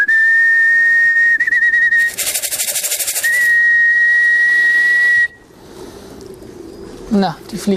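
From 1.09 to 1.18 s, a burst of packet loss removes 60 ms of audio. The receiver covers 55 ms by stretching the last sound and fading it, heard as a brief held sound dying away. A spectrogram shows flat, smeared bands dimming before an abrupt restart.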